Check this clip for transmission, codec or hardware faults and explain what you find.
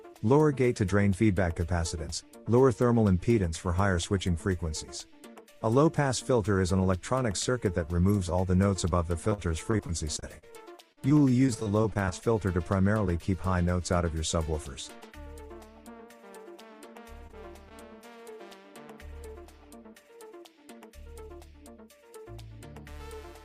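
Two transmission faults are present, both packet loss covered by concealment.

From 9.29 to 12.23 s there is repeated packet loss, producing a robotic sound. Around twenty separate holes, the longest 47 ms, were patched by extending the preceding sound, leaving about 15% of that span synthetic. Because the gaps recur so closely, the audio turns choppy with pieces missing. On a spectrogram, harmonics freeze into flat smeared bands at each patch, and the waveform shows repeated, overly regular segments.

Short concealed packet loss occurs at 17.27 to 17.35 s (two consecutive 20 ms losses) and again at 17.69 to 17.72 s. In each, the receiver filled the missing audio by continuing the last sound, then cross-faded back into the real signal. Each one is heard as a brief smear or wobble. A spectrogram shows a narrow strip of blurred, stretched energy, and the waveform shows a short copied stretch.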